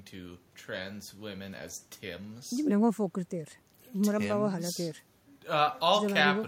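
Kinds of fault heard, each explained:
No faults heard in this recording.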